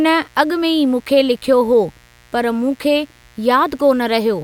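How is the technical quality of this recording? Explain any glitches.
The technical quality is compromised by mains buzz running through the whole speech clip. Switching spikes from 60 Hz mains leak into the signal path, adding a steady, raspy buzz about 35 dB below the speech.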